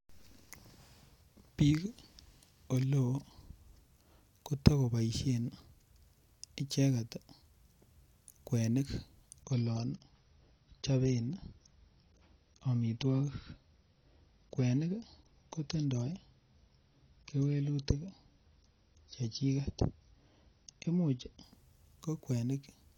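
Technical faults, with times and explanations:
9.43 to 21.43 s, adaptive stream at a lower bitrate: the speech switches abruptly to a thinner, duller sound with no gap in the audio. Nothing is left above 6.6 kHz, so sibilants lose their edge and the top end goes flat. Codec artefacts rise. The player fell back to a cheaper version of the stream while the connection slowed. The sound fits a drop from about 96 kbit/s AAC to about 24 kbit/s.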